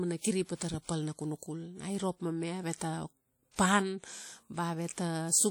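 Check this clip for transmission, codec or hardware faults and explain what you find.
One codec fault runs through the whole clip.

Throughout, the speech carries plainly audible WMA compression damage, likely from an early WMA encoder. Its long transform blocks smear quantisation noise over tens of milliseconds, giving a ringing, washy texture and hiss that swells and fades with the speech. Unlike band-limited codecs, the bandwidth reaches about 20.1 kHz, with the damage spread through the spectrum in a way that fits a bitrate near 48 kbps.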